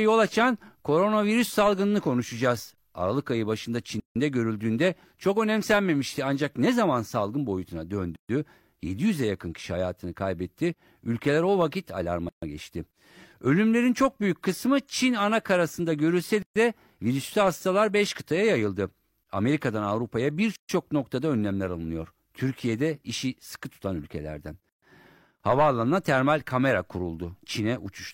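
Gaps at joins of encoded pieces cut the speech at 4.00 s (159 ms), then 8.16, 12.29, 16.42, 20.56 and 24.69 s (133 ms each), every 4 s. Separately encoded segments were joined untrimmed, leaving encoder delay and padding.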